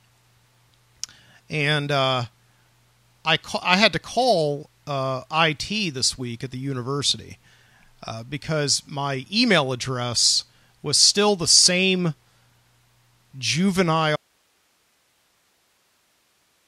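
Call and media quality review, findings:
Signal feed lost at 14.16 s, downstream path still live; likely a capture-side or upstream source interruption rather than a mute or gate. Audio dropout to a faint residue: speech cuts off abruptly mid-flow, no fade, and from 14.16 s to the end only hiss remains, roughly 45 dB below the speech level. Speech never returns before the clip ends.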